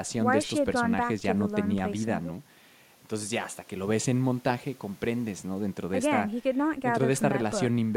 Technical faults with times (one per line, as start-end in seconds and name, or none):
none